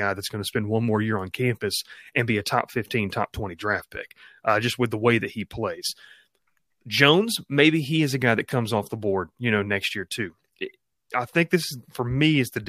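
Nothing stood out on listening to this recording of speech.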